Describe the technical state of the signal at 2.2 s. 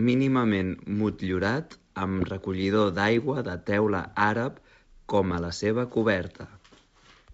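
At 2.2 s the speech is hit by bit errors on an ADPCM link, from 2.20 to 2.25 s, between "mínimament motllurat" and "recollidor d'aigua de teula". The flipped bits corrupt more than single samples: they knock the decoder's step-size adaptation and predictor off track, so each error keeps ringing for a few milliseconds. The result is a short cluster of pops and a rough, gritty burst with brief level jumps. The damage pattern points to a low error rate, roughly a fifth of a percent.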